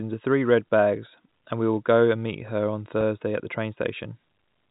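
At 3.01 s, just after "and meet her on" and before "at the", there is a brief packet loss with pitch repetition. About 10 ms of audio went missing, which fits a single lost packet. The receiver filled the hole by repeating the last pitch period of the speech. The gap is so short that no fade to silence occurs. It sounds like a tiny held, slightly buzzy blip in the voice. The surrounding speech comes through the G.711 telephone band.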